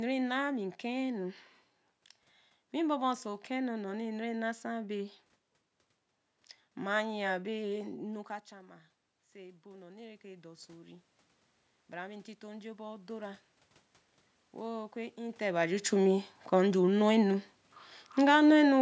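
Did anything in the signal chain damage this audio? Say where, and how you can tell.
Yes. The call processing's automatic gain rising starts at 7.46 s, after the talker moves back and the input drops about 17 dB. Voice and room noise swell together over eight seconds, gaining about 13 dB by 15.46 s, just before "ba ju chu".

Around 15 s, before "ba ju chu", the talker comes close again while the gain is still high. The sound lands loud, then automatic gain falling pulls it down about 4 dB from 15.92 to 18.77 s, with the background sinking alongside.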